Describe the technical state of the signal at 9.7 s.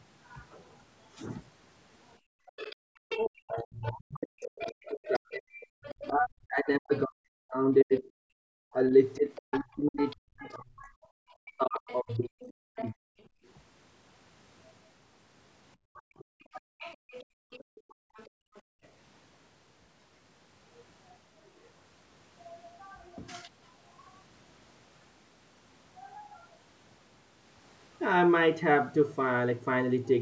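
At 9.7 s you're right in the middle of speech suppressed in double talk, which runs from 2.46 to 13.01 s. Both ends seem to be talking at once here, and the echo canceller, unable to tell the near talker from its own loudspeaker echo, is most likely clamping down on everything. The voice dips and gets chopped, at its worst by around 40 dB, and across the span roughly seven seconds of it is affected.

On top of that, the other side's voice is leaking through from 7.97 to 13.5 s, so at 9.7 s a second voice is audible under the talker, sitting about 15 dB below the main speech. The likely cause is the far end coming out of the talker's loudspeaker and getting back into the mic, with the echo canceller only removing part of it. The call's mic processing is doing its normal job, with nothing above 8 kHz.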